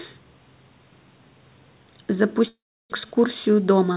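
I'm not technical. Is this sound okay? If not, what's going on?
No. A long network dropout runs from 2.48 to 2.94 s. The call likely lost its connection briefly, so about 0.4 s of speech never arrived. The receiver stretched the last sound into a fading buzz, then left near-silence, and the speech resumes with that piece missing.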